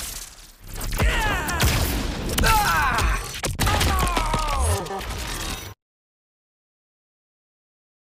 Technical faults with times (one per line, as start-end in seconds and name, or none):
1.40-1.60 chunks out of order
3.60-3.90 chunks out of order
4.80-5.00 chunks out of order